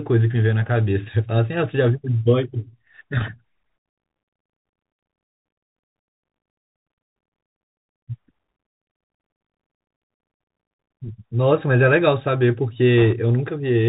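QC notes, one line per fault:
throughout: Bluetooth CVSD headset codec. The speech sounds boxed-in and dull, with nothing above 4 kHz, a grainy hiss beneath it, and scratchy s sounds. This fits a 64 kbps CVSD headset link, whose one-bit up-or-down coding cannot track sharp, loud high detail.
12.98 to 13.13 s: bit errors on a Bluetooth voice link. A brief rushing crackle spreads over the speech without loud clicks. Corrupted bits at roughly a one-in-seventy rate each nudge the waveform slightly before fading out.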